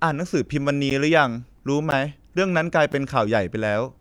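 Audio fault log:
0.90 s, 1.91 s, 2.92 s: gap between chunks. The speech stops for about 13 ms at each of these points, spaced almost exactly 1.0 s apart, which fits audio delivered in one-second chunks with a short silence inserted at every join. Nothing is cut out; the sound simply pauses and resumes, so each gap is heard as a brief hole. On a waveform each gap is a flat line with abrupt edges; on a spectrogram it is a thin, near-empty vertical stripe.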